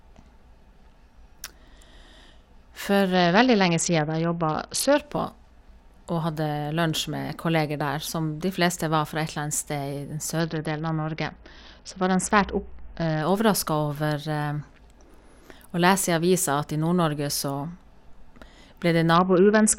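Bluetooth SBC bit pool drops at 3.14–4.97 s, 10.4–13.22 s and 19.15 s to the end dull the speech's treble and add gritty noise, consistent with a squeezed, roughly 60 kbps link.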